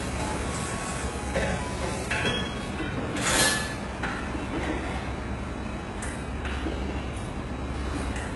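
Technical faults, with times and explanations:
Throughout, HE-AAC compression: heavy damage; treble stops sharply near 11.4 kHz but stays bright, metallic and grainy rather than dull, likely from band replication around 12 kbps.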